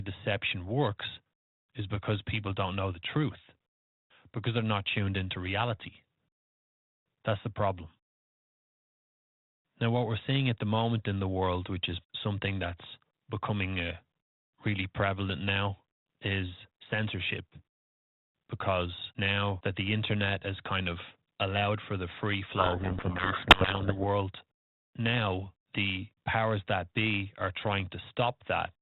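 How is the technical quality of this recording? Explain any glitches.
The speech is band-limited to telephone width with a faint grainy edge, which fits G.726 ADPCM at around 32 kbit/s. From 22.56 to 24.05 s the speech sinks under harsh, rasping distortion. This is a codec payload misread. The receiver takes each G.726 code word with its bits in the wrong order, so every sample's difference value is decoded wrongly and the adaptive prediction drifts. The output is the speech buried in harsh distortion until the packing matches again.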